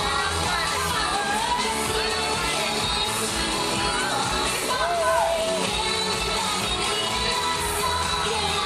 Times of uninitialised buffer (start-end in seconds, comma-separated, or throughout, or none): none